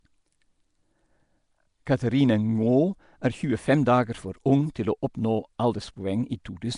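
Speech runs the full clip with plainly audible Nellymoser compression damage: a rough, hissy halo and a smeared, underwater quality, likely from the Flash-era Nellymoser Asao codec at a rate around 44 kbps. Bands too weak to earn bits are filled with noise, so a spectrogram would show grainy, speckled patches between harmonics, blocky time smearing, and nothing above 10.6 kHz. The waveform would look comparatively unremarkable.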